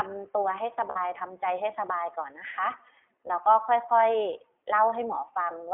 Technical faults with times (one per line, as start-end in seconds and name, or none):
0.00-5.74 iLBC codec
0.90-0.98 lost iLBC frames
3.28-3.31 lost iLBC frames